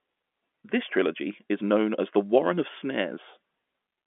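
No technical faults can be heard in this speech clip. It carries the narrow band of G.711 telephone coding, roughly 200 Hz to 3.4 kHz with nothing above about 3.7 kHz, and at most a faint trace of the codec's level-following quantisation noise.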